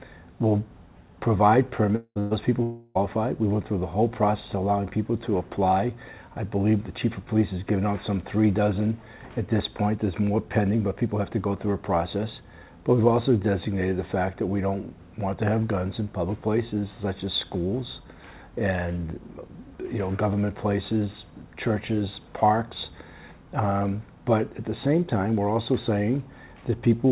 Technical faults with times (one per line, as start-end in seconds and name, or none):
1.96-2.19 long network dropout
2.19-2.34 burst of packet loss
2.63-2.98 long network dropout